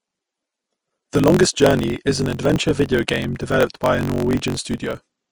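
Throughout the clip the speech is band-limited. The upper range is hissy and grainy, tones sound roughened, and consonant attacks are smeared. The likely cause is Vorbis compression at a low setting, consistent with a bitrate in the region of 33 kbps. At that rate the encoder lowers its cut-off and quantises the treble residue so coarsely that fine detail is replaced by noise of similar energy.

A block size mismatch (truncated) also runs for the whole clip. It shows as a steady buzz at 46.9 Hz and as speech running 1.12 times fast while keeping its timbre. The next stage reads shorter blocks than the stage before it writes, and the tail of each block is discarded. A buzz rate of 46.9 Hz fits 1024-sample reads, and the missing segments account for the faster pacing.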